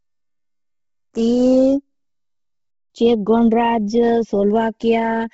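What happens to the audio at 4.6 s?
At 4.6 s you're hearing two things that run through the whole clip. First, the channels drifting apart: the left and right sides sit on clocks that disagree by something like 70 ppm, so the gap between them keeps growing, close to half a millisecond by the end. Summed to mono, that sliding delay drags comb-filter notches slowly down through the speech, giving the hollow, slowly swirling flanging you can hear here.

Second, the speech has a heavy, breathy, grainy coarseness, and there's nothing above about 7.7 kHz. That's most likely Bluetooth LC3 compression. LC3 codes audio in short transform frames, consistent with 10 ms ones, and at a low bitrate, around 16 kbps, it throws away much of the upper spectrum and patches the gaps with noise. That produces the hissy, gritty edge on the speech and the hard ceiling on the top end at this point.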